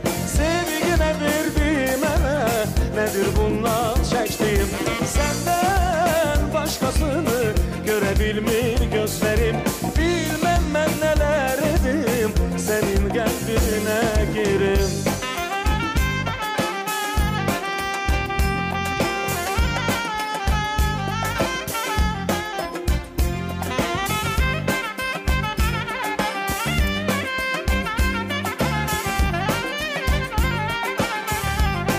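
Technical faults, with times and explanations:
No technical faults detected.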